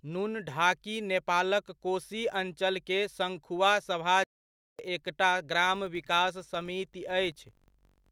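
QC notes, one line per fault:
4.24–4.79 s, playback stall: right after "नेपालक कोशी अञ्चलके सङ्खुवासभा" the speech halts mid-flow for about 0.55 s of silence, then resumes. The likely cause is the player running dry or its thread being blocked.
5.61–8.11 s, filter restarted on every block: a buzz of regular ticks at 46.9 Hz runs to the end. That rate fits a 1024-sample block, each starting from a reset filter state with a small transient. Unlike steady mains hum, it rises and falls with the speech level.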